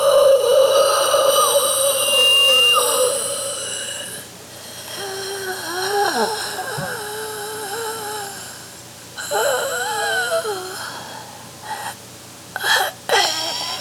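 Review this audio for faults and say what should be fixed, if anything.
A loudspeaker feedback squeal runs from 1.82 s to 2.89 s: a single tone at 2.8 kHz swells over a fraction of a second and settles a few decibels above the surrounding sound before cutting off. A microphone picked up the loudspeaker it was driving, and at 2.8 kHz the loop gain exceeded one, so that frequency fed on itself. To prevent it, lower the gain or separate the microphone from the loudspeaker.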